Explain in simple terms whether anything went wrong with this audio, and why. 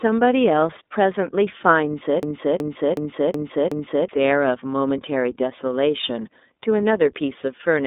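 Yes, two things went wrong. The whole clip has the sound of the iLBC codec, a phone-line speech coder. Nothing above about 3.8 kHz gets through, so the speech sounds thin and muffled. Each 30 ms slice is coded on its own, which leaves a rough, slightly synthetic edge.

From 2.23 s to 4.09 s there is a system hang loop. The computer froze, but the sound hardware kept replaying its last chunk. One 0.37 s piece repeats five times, stuttering at about 2.7 per second. Around two seconds of real audio is lost.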